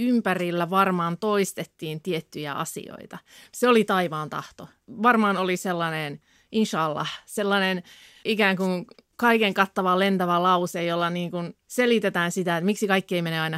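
Nothing stood out on listening to this speech recording.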